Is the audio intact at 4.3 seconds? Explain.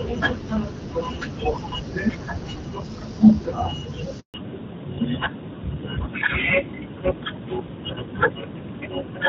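No. At 4.3 seconds the sound has dropped out completely. It fades within a few tens of milliseconds at 4.20 s and stays silent for 140 ms until 4.34 s. This is a handover gap: the call was being moved from one network link to another, and no speech frames arrived while the switch was under way. Whatever was said in that window is lost rather than delayed.

When the sound returns at 4.34 s, it is duller and rougher through to the end of the clip. Everything above 4 kHz has gone, and this is a fallback to narrowband. The new link carried the call on an older, narrower codec. The loss of the top band, after clearer, brighter audio earlier, fits a switch from AMR-WB at around 12.65 kbit/s to AMR-NB at around 12.2 kbit/s.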